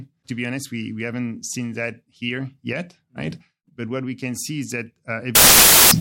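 Speech runs cleanly up to about 5.35 s, and right after "can see is that" it collapses into loud, harsh broadband noise that lasts to the end at 6.01 s. That's samples built from the wrong bytes: the reader is stitching each sample together off by a byte, swapping byte order or misjudging alignment, so the jittery low bits end up as the big part of every value.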